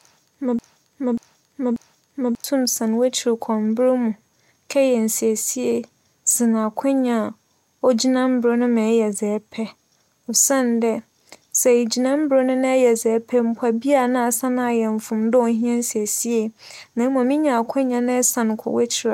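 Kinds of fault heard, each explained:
Broken-record loop, 0.00 to 2.44 s: the clip opens caught in a 0.59 s fragment of speech that repeats exactly three times back to back, likely because the player or stream stalled and kept resending its last buffer, so the intended speech there is lost.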